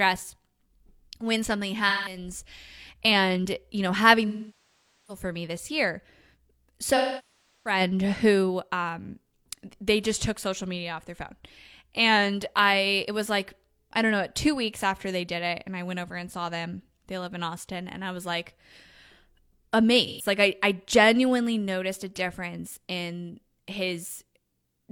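Speech with AAC frame loss with concealment at 1.88–2.17, 4.28–5.23, 6.96–7.80 and 20.06–20.26 s. The decoder rebuilds the audio from the last good spectrum, so the short losses sound smeared and phasey. The long ones decay and then fade back in, unlike the abrupt silence of a hard dropout.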